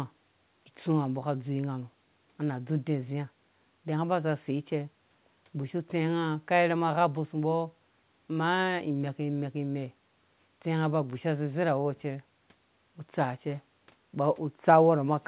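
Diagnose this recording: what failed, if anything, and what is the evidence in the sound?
Nothing failed; no stage in the chain shows a fault.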